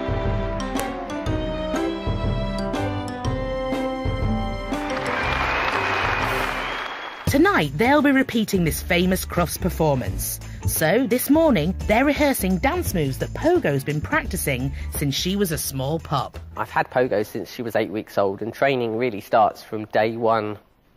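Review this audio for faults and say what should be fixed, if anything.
A single sharp, loud click at about 0.80 s cuts through the sound and has nothing to do with what the signal is doing at that moment. This is a file header played as audio. WAV pieces were joined or streamed at that point, and the next piece's header was left in place. Its few dozen bytes of format information were read as sample values, which produces that brief, loud snap. To prevent it, strip each file's header and append only the raw sample data when concatenating or streaming WAV segments.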